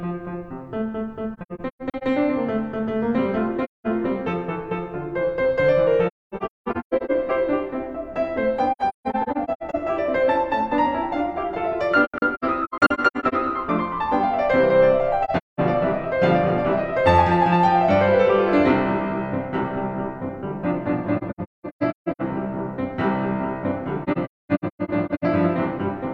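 The music falls into AAC frame loss with muting at 1.33–2.03, 3.64–3.87, 6.07–7.11, 8.72–9.75, 12.04–13.34, 15.24–15.60, 21.17–22.22 and 24.03–25.24 s. Lost frames were decoded as silence, so the sound fades out and back in through the overlapping windows, leaving clusters of soft-edged holes. The longest gaps reach about a third of a second. The soft edges set this apart from hard-cut dropouts.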